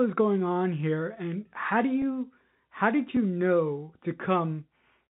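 At 2.02 s, just after "here and how do", there is packet loss with pitch repetition. About 10 ms of audio never arrived, which fits a single lost packet. The receiver bridged the gap by repeating the last pitch period of the speech. Because the loss is so short, it comes across as a brief held, slightly buzzy note rather than a dropout. The telephone band limit from G.711 coding is audible throughout the clip.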